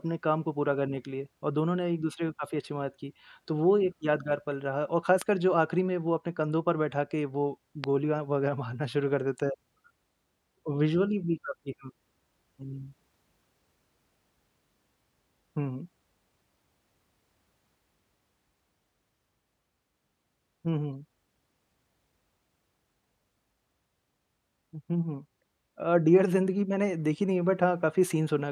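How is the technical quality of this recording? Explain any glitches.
Two loud pops interrupt the speech, at 5.22 to 5.24 s and again at 7.84 to 7.86 s. The likely cause is a sudden voltage step or spike entering the signal chain, such as a connector being disturbed, a switch, a static discharge or a driver glitch. The following circuitry shapes that spike into a brief pulse about 15 dB above the speech. Each is heard as a single sharp pop lasting about 20 ms, while the speech continues underneath.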